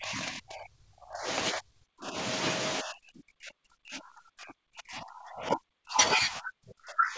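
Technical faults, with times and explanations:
0.00–1.27 s, 1.52–2.16 s, 2.80–5.98 s and 6.15 s to the end: speech suppressed in double talk. The speech sinks raggedly by up to about 40 dB, likely because the echo canceller mistook it for loudspeaker echo while both sides talked. Unlike packet loss, it dips unevenly.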